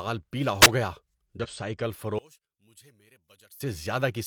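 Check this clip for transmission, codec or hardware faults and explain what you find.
Three separate faults affect this speech recording, one from the radio link, one from the codec, and one from channel polarity.

Between 0.61 and 0.67 s there is a wireless microphone squelch dropout. The analogue FM signal faded far enough that the receiver's squelch gate shut the output. You hear a short surge of hiss as reception weakens, then a gap of silence far too short to register as a pause, and the voice comes back.

From 1.40 to 1.47 s, compressed frames were skipped. Part of the encoded stream was never decoded, either because it was missing or because the decoder rejected it as corrupt. Playback jumps forward by about a tenth of a second of speech, with the lost material simply gone.

From 2.19 to 3.60 s, one channel is likely inverted. With one side's polarity flipped, everything shared by both channels cancels when the stereo is folded to mono. 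The centred voice drops by about 26 dB. What remains is the small difference between the channels, so for those seconds the speech sounds faint.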